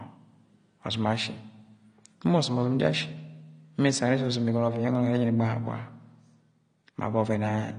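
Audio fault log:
Throughout: AAC compression, likely AAC-LC. The speech sounds dull, with nothing above 9.7 kHz, and sibilants carry a plainly audible warbling fizz. Unlike a clean low-pass filter, the remaining bands sound patchy and smeared from coarse quantisation, which fits a bitrate near 32 kbps.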